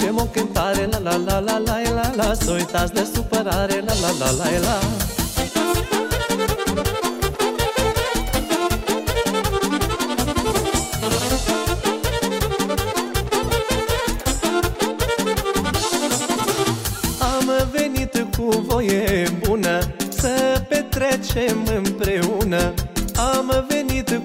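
No technical faults can be heard anywhere in the audio.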